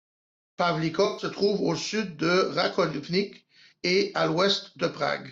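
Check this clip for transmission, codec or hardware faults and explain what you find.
One codec fault is present: AAC frame loss with concealment, from 1.05 to 1.26 s, just before "trouve à au sud". About 128 ms of coded audio never reached the decoder, which fits the loss of a short run of AAC frames. The decoder covered the gap by rebuilding it from the last good spectrum, reusing its energy with scrambled phase. The result is a brief smeared, noisy, phasey patch in the speech rather than a clean dropout.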